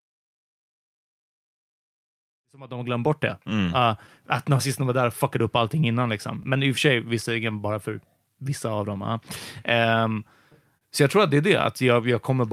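Clock drift between sender and receiver runs through the whole of this speech clip. The sending side's clock is about 3 percent slower than the receiving side's, so the receiver's jitter buffer keeps draining and the playback end must keep adjusting to stay fed. The result is a slightly unsteady pace across the audio rather than any single obvious break. It shows up as small timing hiccups at no fixed spacing.

Repeated timing corrections run from 0.06 s to 12.36 s. They are how the receiver copes with the slow sender. Because it runs out of material, it keeps repeating short pieces, always in the same direction, and these work out to an effective speed of 97 percent. Altogether they add roughly 0.4 s of duration. Each repeat is tiny and irregularly spaced, so the effect is a faint stutter or a rhythm that doesn't sit quite evenly. During this stretch the level also rises in a smooth fade-in from around 2.5 s to 3.43 s.

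A short stall from a late packet occurs at 10.77 s to 10.83 s. A packet arrived 37 ms late, and the jitter buffer had nothing left to play. The receiver held the last sound for 37 ms until the data came in, then continued from exactly where it left off, so nothing is lost. What you hear is a brief sustained smear, with a slight buzzy quality or momentary dip.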